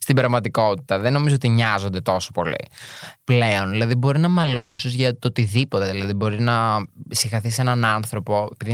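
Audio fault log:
4.38–4.56 s, repeated packet loss (robotic sound): the speech turns choppy as a quick succession of tiny holes, none longer than about 10 ms, break it up. Each hole is bridged by stretching the sound just before it, and 50 ms of this stretch is patched that way, about 28% of it. Unlike a single long dropout, real speech keeps returning between the patches, so the result is a stuttering, mechanical texture rather than one sustained smear.
4.56–4.80 s, long network dropout: right after the choppy stretch, the sound stops progressing and becomes a single held, buzzy continuation of the last fragment for about 230 ms, with the real audio for that span missing. The likely cause is a stretch where nothing arrived from the network, so the receiver kept extending what it had. Unlike the stretch before it, no real speech breaks through, and it never fades to silence before the audio resumes.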